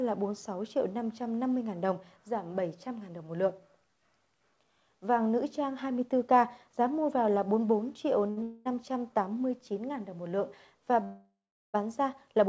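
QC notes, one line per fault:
8.30–8.39 s, short stall from a late packet: the last sound is held for 67 ms while the jitter buffer sits empty, then resumes from the same point with nothing lost.
8.43–8.67 s and 11.04–11.76 s, call audio freeze: the last sound carries on as a fading buzz or hiss. In the second freeze it decays into 380 ms of silence. The likely cause is packets held up in transit that drained the jitter buffer. Playback then resumes where it stopped, inserting a gap of 228 ms and 697 ms respectively.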